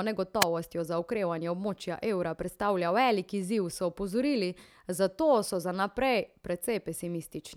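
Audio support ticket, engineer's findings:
Wireless microphone squelch dropout, 0.40–0.45 s, just before "za okrevanje območja evra". Hiss/static swells, output cuts to near silence very briefly, speech returns. Probable component: analogue FM receiver. RF fade drops below the squelch threshold, which mutes the output. Distinct from a digital packet dropout: the noise rises before the gap, with no abrupt click or repeated fragment.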